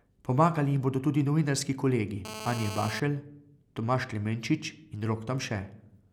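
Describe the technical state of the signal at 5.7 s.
At 5.7 s the signal is intact, with no audible fault at that point in the speech.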